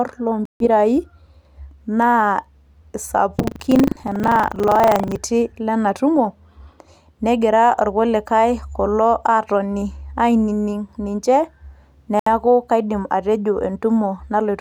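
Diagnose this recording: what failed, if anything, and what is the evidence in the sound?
The wireless playback link most likely suffered a Bluetooth stall: delayed packets had to be resent and the headphone buffer ran empty. The speech cuts to silence for 148 ms between 0.45 and 0.66 s, and for 70 ms between 12.19 and 12.27 s, then resumes.

At the driver and buffer stage, buffer tearing runs from 3.36 to 5.18 s because the ring buffer's write and read positions slipped across each other. A small slice of each period holds audio from about 70 ms earlier, joined with hard edges. This gives a robotic 25 Hz buzz over the speech.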